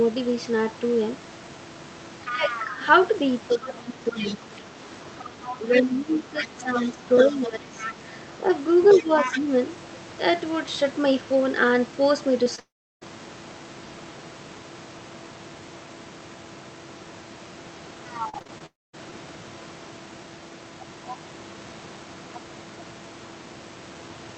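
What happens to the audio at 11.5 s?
At 11.5 s the speech carries on intact, with no dropout, glitch or other fault at that moment.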